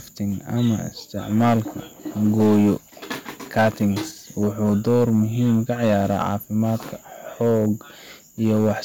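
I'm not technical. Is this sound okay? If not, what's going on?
No, not quite. There's hard clipping: the speech is louder than the recording chain could handle, so peaks get chopped flat and turn crackly or fuzzy. It happens at 0.59–0.73, 1.35–1.59, 2.24–2.73, 3.57–3.87, 4.41–6.75, 7.41–7.68 and 8.44–8.72 seconds. The short stretch at 3.57–3.87 s is pushed hardest.

At 2.88 s there are compressed frames skipped. A couple of small chunks of the compressed audio were never played, so the speech jumps ahead by about a twentieth of a second.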